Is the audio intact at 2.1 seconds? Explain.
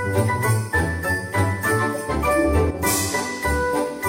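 Yes, the audio is intact at 2.1 seconds, with no dropout, click, distortion or other fault audible at that moment.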